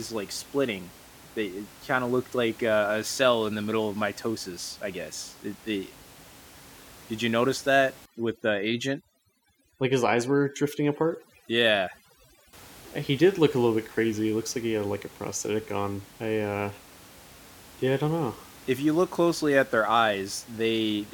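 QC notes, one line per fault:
8.06–12.53 s, overdone noise removal: just after "did you notice that", an over-aggressive denoiser mutes any frequency band near its noise estimate. The room noise, about 23 dB below the speech, drops and breaks up into twinkling specks, and the voice loses its quiet parts.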